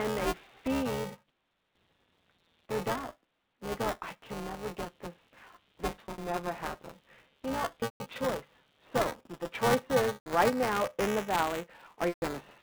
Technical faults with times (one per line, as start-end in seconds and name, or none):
0.00-12.62 computer activity noise
0.00-12.62 buffer tearing
5.90-6.22 packet loss with pitch repetition
7.80-8.00 packet loss with pitch repetition
10.14-10.26 packet loss with pitch repetition
12.08-12.22 packet loss with pitch repetition